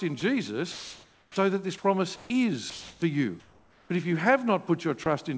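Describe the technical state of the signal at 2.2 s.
At 2.2 s the sender's voice detector has likely judged quiet speech or a word ending to be background and stopped transmitting, so the receiver fills the gap with comfort noise. This is sound dropped by the voice detector. From 2.16 to 2.30 s, 140 ms of signal is replaced by steady synthetic noise, and 60 ms of real speech is lost before sending resumes. Like the rest of the call audio, the passage carries nothing above 8 kHz.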